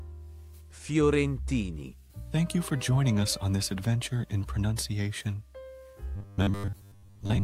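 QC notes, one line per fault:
6.16 to 7.44 s, robotic sound from repeated short buffers: the sound turns into a rigid, metallic buzz at a fixed 100 Hz, which matches a chunk of about 10 ms being replayed over and over. Most of the real audio in this stretch is skipped, likely because new data reaches the playback buffer too seldom and the gaps are filled with copies. Unlike a stutter or dropout, the result is a steady imposed pitch that still roughly tracks the original contour.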